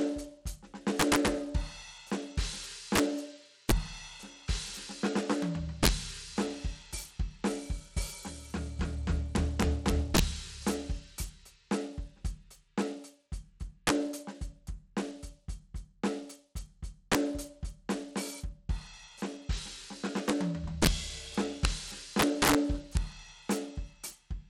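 Integer overflow runs through the whole music clip. The signal is driven roughly 8 dB past full scale, and instead of being limited, the loudest peaks wrap around to the opposite extreme of the integer range. Only a small fraction of samples, well under one percent, cross the limit, but each one jumps across the full range. The result is violent, snapping cracks on loud moments, far harsher and more sudden than ordinary clipping.

Bluetooth SBC compression is also present from start to finish. The damage is plainly audible: nothing remains above 17 kHz, the upper treble thins and flickers, and a gritty, grainy noise with some aliasing sits on the music. The likely cause is SBC encoding with a small bit pool, consistent with a stream around 96 kbps. The weak upper sub-bands get few or no bits, and the remaining bands are quantised coarsely.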